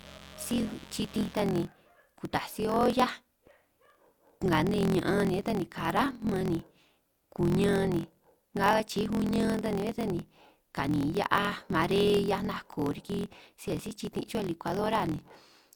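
Block size mismatch (truncated) runs through the whole speech clip: one stage writes longer blocks than the next reads, so each block's tail is discarded. This produces a 43.1 Hz buzz and speech running 1.12 times fast at roughly normal pitch, which fits a 1024-sample read. Mains buzz sits from 0.0 to 1.33 s, a steady raspy 60 Hz hum about 20 dB below the speech, where switching spikes twice per mains cycle leak in and spread harmonics up into the kilohertz range.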